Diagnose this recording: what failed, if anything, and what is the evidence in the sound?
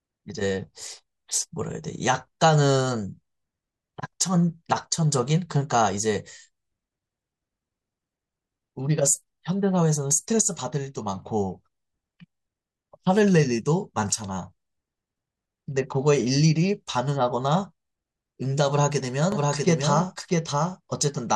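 A second copy of the signal entered the mix near the end, likely through a duplicate, slower capture path or an edit that left two out-of-step copies in the file. From 19.32 s to the end, the speech is doubled: an identical, full-band copy trails the original by roughly 0.7 s, about 5 dB quieter. It carries no decay or room colour and enters abruptly, the classic signature of a doubled audio track rather than an acoustic echo.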